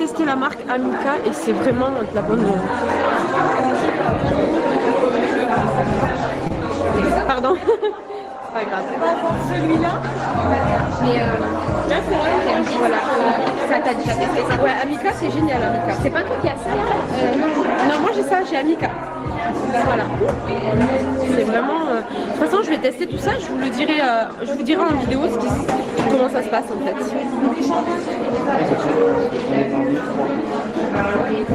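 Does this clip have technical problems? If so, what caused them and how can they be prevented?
Yes, there's a short concealed packet loss at about 6.47 to 6.52 s. About 20 ms of audio never reached the decoder in time, so the receiver extended the preceding sound for 25 ms and blended back, leaving a brief smear. A deeper jitter buffer or forward error correction would prevent it.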